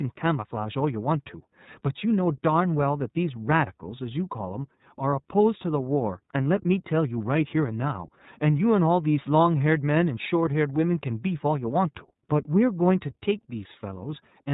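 Speech coded throughout with the iLBC codec: the band stops at 4 kHz, and the voice sounds clear but plainly rough and synthetic, since each frame's excitation is coded on its own at a low rate, which fits the 13.33 kbps, 30 ms frame mode. From 5.10 to 5.13 s there are lost iLBC frames. The decoder fills the 30 ms gap, which fits one missing frame, by repeating the last pitch cycle blended with noise, giving a brief held, buzzy vowel before the voice returns immediately.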